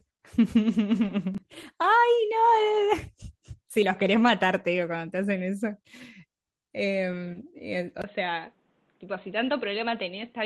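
From 1.03 to 1.09 s, two lost packets appear to have been rebuilt from error correction: about 40 ms of sound is played from low-bitrate backup copies, so there is no gap, but that stretch turns rougher and noisier.

Between 1.34 and 1.63 s comes processor overload crackle. A run of buffers, which fits roughly 10 ms each, missed their deadlines and were skipped outright, leaving tiny hard-edged holes that merge into a gritty tearing over the sound until the load eases.

At 6.84 to 6.86 s, a second lost packet rebuilt from error correction fills 20 ms with a coarser, noisier copy, heard as a short rough patch.

From 8.02 s to the end, the input was likely switched to a poorer device. A 20 ms silence marks the change. After it, nothing above 4.2 kHz remains, the level drops by roughly a few dB, and a faint new noise floor sits far below the signal.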